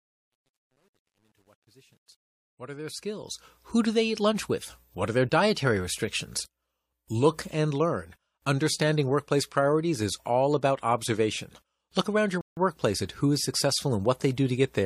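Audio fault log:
0.00–3.66 s, truncation distortion on a fade: As the speech fades in from near silence, the quiet portion sounds gritty and granular. It is worst from 0.00 to 2.71 s, and it cleans up as the level rises. The grain fits a fade computed at about 10-bit resolution without dither, so the low-level waveform collapses into coarse steps. Broadband noise would stay constant; this distortion tracks the level and fades away as the signal grows.
12.41–12.57 s, rebuffering stall: Between "around your" and "workplace at who is", the audio halts in about 158 ms of silence and then picks up exactly where it stopped. The playback ran short of data and paused until more arrived. A dropout removes part of the sound, but here nothing is missing. The surrounding speech stays intact, and the gap adds time to the clip.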